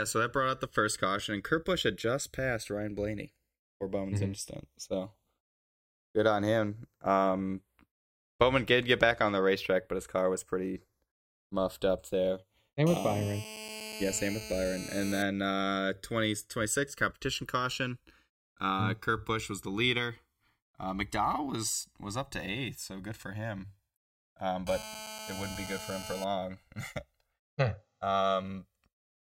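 A speech recording with channels drifting apart for its whole length: the two channels appear to come from devices running on separate clocks that disagree by something like 70 ppm, so the offset between them grows steadily, reaching roughly 1.5 ms by the end. Heard in mono, the summed channels form comb-filter notches that glide slowly through the spectrum, giving a gradual flanging colour. GSM phone buzz appears from 12.87 to 15.23 s and again from 24.67 to 26.24 s, a hard, raspy tone at 217 Hz with dense harmonics, sitting about 11 dB below the speech. A nearby 2G handset on a call is transmitting in bursts at that rate, and the audio circuitry rectifies the radio pulses, so the buzz holds steady through each stretch and has no relation to what is being said.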